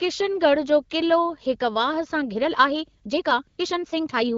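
From 2.28 s to the end at about 4.37 s, software likely squeezed the speech to fit a length, a time-stretched section running 1.44 times faster at unchanged pitch, so the pace turns rushed. Within it, at 3.03 s and again from 3.47 to 3.57 s, the phone stopped sending speech frames and AMR comfort noise filled the gaps with smooth synthetic hiss.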